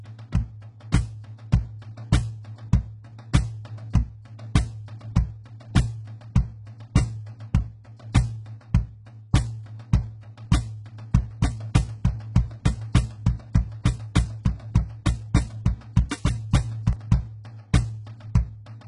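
Throughout the music, heavy HE-AAC compression damage is audible, fitting a bitrate around 12 kbps. The treble stops at 11 kHz and is rebuilt from copied lower bands, not simply cut, so it sounds gritty and metallic. From 11.31 to 16.93 s a doubled audio track appears, likely a second copy mixed in about a second late and about 5 dB quieter. Unlike an echo, it has no decay, and it starts and stops abruptly.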